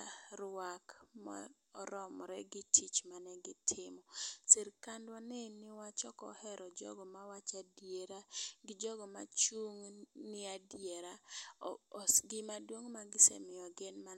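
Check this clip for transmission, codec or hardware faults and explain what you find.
No transmission, codec or hardware faults.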